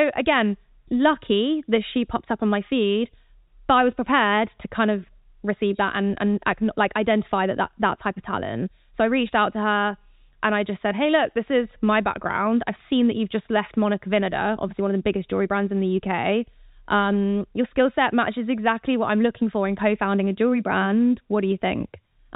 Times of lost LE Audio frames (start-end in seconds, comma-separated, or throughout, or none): none